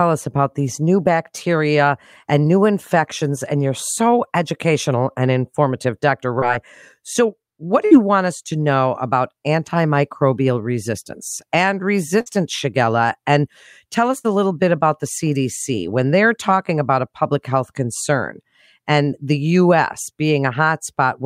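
A speech recording with packet loss in two forms. At 6.39 to 6.44 s there is a short concealed packet loss: about 20 ms never arrived, and the decoder bridged it by extending the preceding sound for roughly 22 ms before blending back, leaving a brief smear. Three bursts of packet loss are longer: 7.86 to 7.93 s, just before "want us to know"; 12.21 to 12.28 s, right after "about antimicrobial resistance and"; and 14.18 to 14.26 s, just before "a little bit about". In each, about 60 ms went missing and concealment held the last sound for 51 to 62 ms while fading it, so you hear a decaying buzz or hiss and then a jump forward past a lost fragment, rather than a brief tick.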